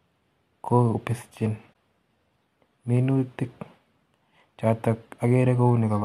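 At 1.73 to 1.75 s there is a corrupt frame concealed by the decoder. Flipped bits made one AAC frame unreadable, and the decoder detected this and covered it. The concealed span, about 22 ms long, fits a single damaged frame.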